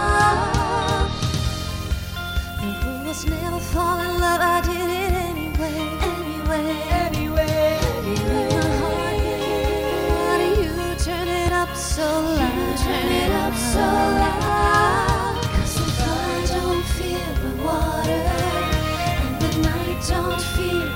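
Small forward jumps in the audio at 11.48 s and 14.48 s, of roughly 5 ms and 10 ms, are likely a dropped buffer (overrun): the sound skips ahead rather than dropping to silence.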